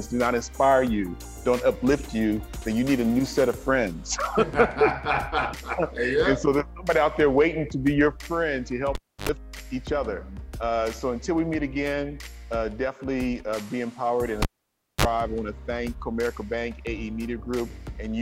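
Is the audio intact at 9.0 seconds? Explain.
No. At 9.0 seconds the audio falls inside a cable pulled and plugged in fault running from 8.95 to 9.29 s. A live lead comes out and goes back in: a pop, about 0.29 s of near silence, then roughly 0.08 s of 50 Hz mains buzz while only the plug tip makes contact, and a second pop as the sound returns. The waveform shows two sharp spikes around a flat gap. The spectrogram shows broadband vertical streaks at each pop and a short stack of 50 Hz harmonics just before reconnection.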